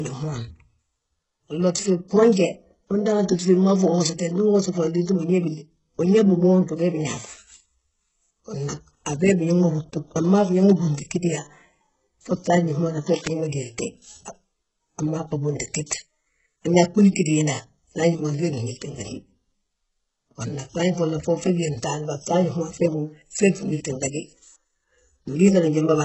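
Speech throughout carries heavy damage, likely from HE-AAC compression at a rate that fits about 8 kbps: sibilants sound gritty and metallic, and a spectrogram shows nothing above 8 kHz with smeared, replicated treble. From 13.07 to 13.28 s, a burst of cable scratch noise, likely from a worn connector being moved, rustles roughly 15 dB below the speech, appearing as a ragged broadband smear on the spectrogram and jagged fuzz on the waveform.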